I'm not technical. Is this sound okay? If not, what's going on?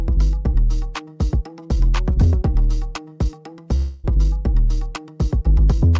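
No. There's a long network dropout from 3.76 to 4.06 s. For about three tenths of a second the sound smears into a fading buzz of what came just before, then resumes with that stretch gone. Likely, audio never arrived, so the receiver stretched the last sound over the gap.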